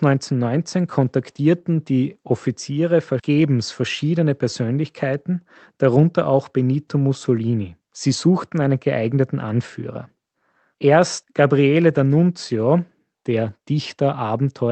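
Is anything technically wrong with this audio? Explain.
No, nothing's wrong here: it's speech that has come through an ordinary call connection, so the top end stops at about 8 kHz, as you'd expect from a typical voice-call codec like Opus.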